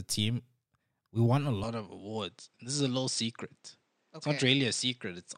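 Right after "we won a", at 1.64 s, the sound turns duller and drops a few decibels in level, with no gap at the change. From there to the end, nothing comes through above 9 kHz, and a faint new background noise sits well under the speech. That's most likely the input switched to a poorer device, a second microphone or a headset's call mode with a narrower band and a different tone.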